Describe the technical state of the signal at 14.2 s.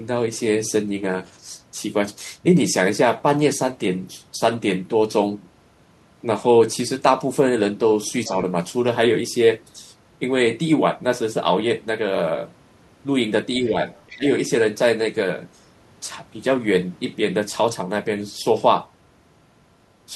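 At 14.2 s the signal sits inside a burst of speech suppressed in double talk, running from 14.11 to 14.26 s. With both ends talking at once, the echo canceller likely could not tell the local talker apart from the loudspeaker echo and pulled the whole signal down. The talker's voice sags by as much as about 20 dB for roughly 150 ms before recovering.

Just before that, from 13.98 to 14.13 s, the other side's voice is leaking through. The loudspeaker playback is likely reaching the microphone without being fully cancelled, so a faint second voice, roughly 25 dB below the talker, slips into the signal. It is a short scrap of the far end, and it runs on until 14.13 s, so the two faults overlap briefly.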